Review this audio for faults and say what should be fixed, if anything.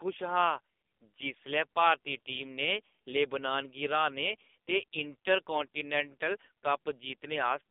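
The speech runs through AMR narrowband mobile codec coding for the whole clip. Nothing passes above about 3.7 kHz or below 250 Hz. Heavy buzzy, synthetic damage fits a low 5.9 kbps mode. Prevent it by recording directly, bypassing the mobile call path.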